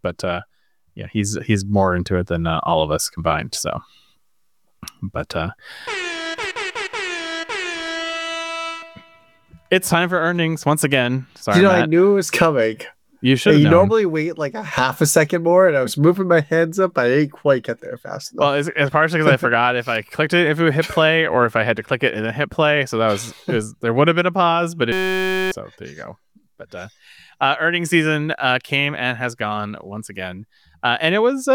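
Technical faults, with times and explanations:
24.92–25.52 s, system hang loop: one 5.33 ms slice repeats at 188 Hz, which fits a 256-sample buffer, producing a steady buzz instead of a dropout's silence.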